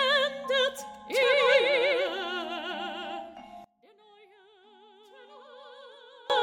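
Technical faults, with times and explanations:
3.64 to 6.30 s, one channel inverted: likely one stereo channel's polarity flipped, so summing to mono cancels everything the two channels share. The level falls by about 26 dB, leaving only a faint residue of whatever differs between left and right.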